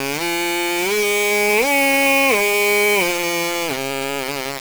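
From start to finish the music is coated in a harsh, grainy distortion that rises and falls with the sound itself, with the quieter passages breaking up into sputtering fuzz or dropping out between coarse steps. The error sits only about 5 dB below the music. The likely cause is low bit depth without dither: the audio appears to have been rounded to just 3 bits, so the rounding error tracks the signal instead of becoming a steady hiss.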